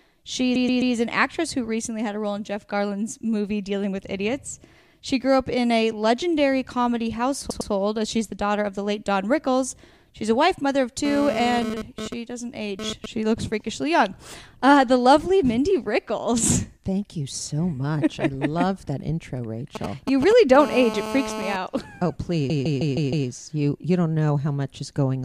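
From 0.55 to 0.94 s there are repeated frames. A 130.6 ms block of compressed audio is played three extra times, which fits a run of five frames, and it adds about 0.39 s. The sound stutters. On a spectrogram the same patch appears side by side several times. In the waveform, identical shapes repeat. A second stutter at 7.50 to 7.71 s loops a 104.5 ms block twice more, consistent with four frames, and adds about 0.21 s.

From 11.05 to 13.06 s a GSM phone buzz comes in, about 7 dB below the programme. A nearby 2G phone is moving data in bursts at 217 Hz, and the audio circuitry rectifies those pulses into a hard, raspy drone that has nothing to do with the material. Because it is a data transfer, the buzz comes and goes. A spectrogram shows a dense comb of harmonics spaced 217 Hz apart, reaching high into the spectrum. The waveform shows flat-topped pulse trains riding on the signal.

From 19.75 to 20.57 s there are GSM signalling bursts at around 5 dB below the signal. 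These are short groups of radio bursts, rectified into a galloping dit-dit-dit of brief 217 Hz buzzes. On a spectrogram they form short vertical columns of harmonic comb in an uneven rhythm. The waveform shows isolated clusters of pulses. Right after, from 20.60 to 21.56 s, the GSM phone buzz returns at about 7 dB below the signal. This time it holds steady, as it does during a call, and shows as unbroken horizontal harmonic lines.

From 22.49 to 23.28 s come the longest repeated frames. A 156.7 ms block, fitting six frames, is played five extra times and adds about 0.78 s. The result is a machine-gun stutter, with a row of identical copies visible on the spectrogram.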